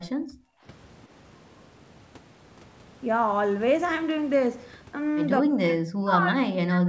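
Right from the start, 0 to 0.65 s, there's background gated by the echo canceller: the room tone gets clamped down by about 34 dB while the far-end loudspeaker plays, so the background drops near-silent for roughly seven tenths of a second before creeping back.

From 5.43 s to the end, the talker dips hard, by something like 40 dB at the worst point. That's most likely speech suppressed in double talk: with both sides talking, the canceller couldn't separate local speech from echo and turned everything down. The audio stops at 8 kHz, which fits a G.722 call path.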